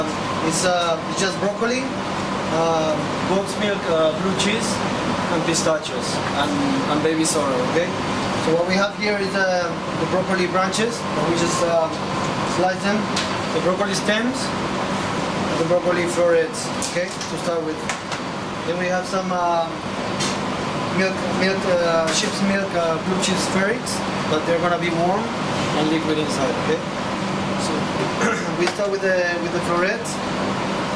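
Nothing in the audio stands out as a technical fault; it just runs along without any problem worth pointing to.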